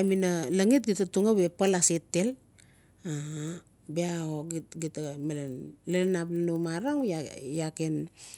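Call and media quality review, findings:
Resampler restarted on every block, present throughout the speech. Symptom: steady 25 Hz tick/buzz riding on the voice, gone in pauses. Component: 24 kHz to 48 kHz upsampler processing 40 ms blocks independently, consistent with 960-sample input blocks. Mechanism: filter state discarded at each block edge, so the converter sees silence or wrapped samples instead of neighbours, leaving a small error every 40 ms. Spectrogram: faint vertical lines every 40 ms, only under signal. Waveform: small discontinuities at the same spacing.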